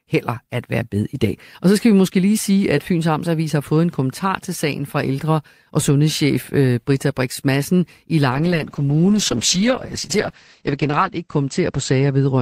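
At 8.31 s a call bitrate drop sets in and lasts to 12.41 s. The sound turns rough and muffled, which points to the encoder falling from about 40 to 9 kbps. High frequencies above 8 kHz vanish, down from 20 kHz. The worst stretch lasts 2.8 s.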